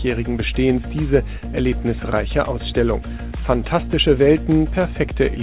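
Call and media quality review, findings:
Nothing to flag on this one; it's a normal call path, with the narrowband telephone codec keeping everything below about 4 kHz as you'd expect at 64 kbps.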